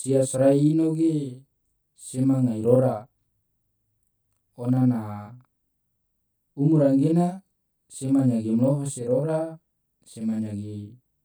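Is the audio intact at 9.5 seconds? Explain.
No. At 9.5 seconds the speech carries a channel delay (doubling), present throughout the clip. One channel arrives about 40 ms late. When the two are summed to mono, the late copy stands apart. Each syllable sounds doubled, like a short slap echo at equal level.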